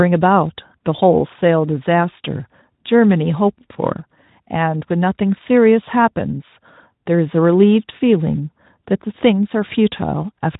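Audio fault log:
No faults are present in the speech signal, which passes through the Speex codec as that codec normally sounds, with the audible band ending near 3.8 kHz and only a light coding texture.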